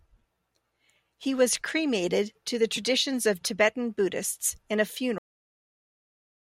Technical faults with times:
5.18-6.59 cut-off end

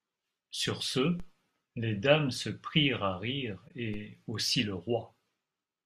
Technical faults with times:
1.20 DC step
3.68-3.71 corrupt frame concealed
3.94 DC step

